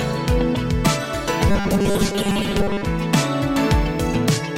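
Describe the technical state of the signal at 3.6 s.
At 3.6 s the signal is intact, with no fault to be heard at that point.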